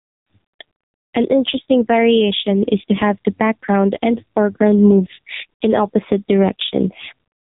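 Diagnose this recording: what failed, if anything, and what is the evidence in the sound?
Gain pumping runs through the whole clip: the gain swings by roughly 15 dB, pulled down under each loud stretch of speech. At the call-processing stage, the likely cause is an input gain set far too hot with a fast limiter pulling it back.

AMR narrowband mobile codec damage is also present throughout. Nothing passes above 3.8 kHz, and the voice sounds buzzy and synthetic. Damage this heavy points to one of AMR-NB's lowest bitrate modes, around 5.9 kbps.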